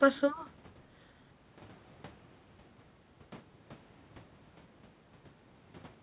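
No technical faults can be heard in this speech: it has the narrow, telephone-like band of a call, with nothing above 4 kHz, which fits the G.711 mu-law codec on the call path, and the lowest bass is trimmed as usual by the call's microphone processing.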